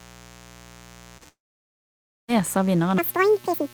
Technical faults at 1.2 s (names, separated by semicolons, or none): mains buzz; short concealed packet loss; long network dropout